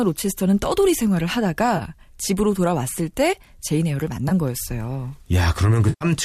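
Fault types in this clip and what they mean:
AAC frame loss with concealment: coded audio went missing and the decoder filled the gaps from the last good spectrum, likely in a low-delay AAC stream, with lost stretches of 30 ms near 1.77 s, 20 ms near 4.29 s, and 120 ms from 5.89 s to 6.05 s. These sound like smeared, noisy or phasey patches. A spectrogram shows blurred, noise-filled columns where harmonic lines lose definition, and the waveform shows a smoothed, irregular envelope across each patch.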